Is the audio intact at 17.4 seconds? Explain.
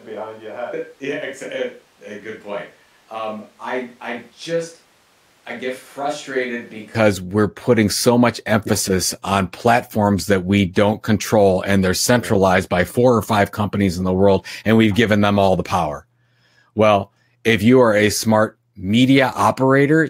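Yes, the speech at 17.4 seconds plays through intact, with no audible fault at that moment.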